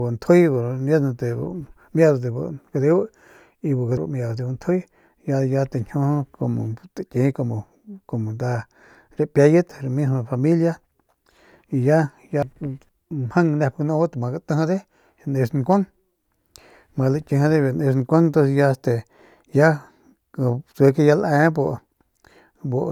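At 3.97 s, between "y bu" and "mieudat de", compressed frames are skipped: roughly 0.3 s of speech (about three 92.9 ms frames) never plays. It happens again right after "y ya" at 12.43 s and at 12.89 s, each dropping about 0.7 s. Each time, the speech jumps ahead.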